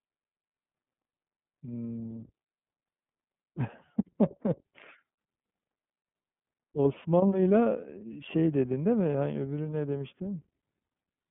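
A speech clip carrying the iLBC codec throughout. The band stops near 3.4 kHz, and plainly audible coding roughness gives a synthetic edge, consistent with the 13.33 kbps mode. Lost iLBC frames cause a 30 ms gap from 6.56 to 6.59 s, which fits a single lost frame. The decoder fills it with a held, slightly buzzy repeat of the last pitch cycle, and the speech recovers at once.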